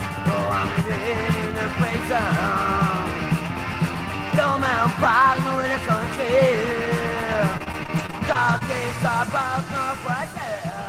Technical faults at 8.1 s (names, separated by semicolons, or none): repeated packet loss (robotic sound)